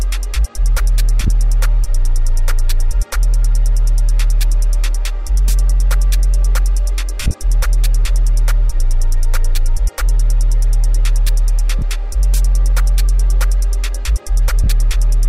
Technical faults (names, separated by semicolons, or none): lost LE Audio frames